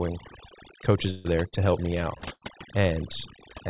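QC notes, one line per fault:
Throughout: overdone noise removal. The background breaks into twinkling, warbling specks. A noise reducer set too strong pulled whole frequency bands down whenever they sat near its noise estimate, taking quieter parts of the voice with them.
1.10–1.27 s and 2.33–2.44 s: burst of packet loss. Each gap is filled with the last sound carried on and fading, heard as a held buzz or a dying hiss. The speech then jumps ahead. About 150 ms is missing behind a 144 ms fill in the first, and 90 ms behind an 83 ms fill in the second.
1.48–1.55 s and 2.18–2.24 s: short concealed packet loss. A brief smear or wobble occurs just before "help me" and again just after "help me", each with about 30 ms of audio lost. The receiver bridged each hole by extending the preceding sound and blending back into the real signal, within a band that stops at 4 kHz.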